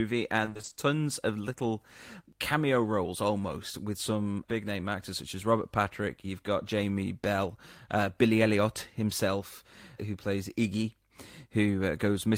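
Repeated packet loss (robotic sound) runs from 0.45 to 0.77 s, just before "of little cameo roles". Eight gaps, none longer than 20 ms, were patched by extending the preceding audio, so concealment fills half the stretch, 160 ms in all, leaving the speech choppy with pieces missing.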